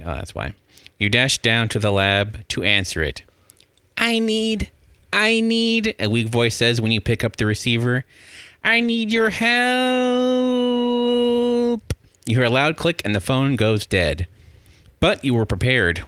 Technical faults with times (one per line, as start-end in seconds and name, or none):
8.68-9.81 call bitrate drop